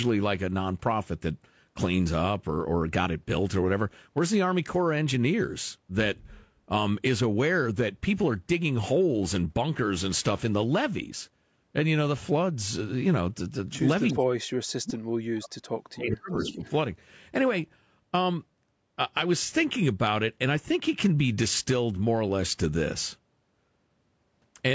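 From 14.09 to 14.13 s a faint echo leak appears: a delayed copy trailing 370 ms behind, likely because a loudspeaker's echo canceller let part of its pickup through. It returns louder from 16.37 to 16.7 s. From 14.13 to 16.35 s the speech is suppressed in double talk, likely because the canceller mistook the talker for echo. The speech drops in patches by roughly 40 dB, with a brief shallow dip from 16.51 to 16.59 s. Unlike the echo, nothing extra is heard; the talker simply fades.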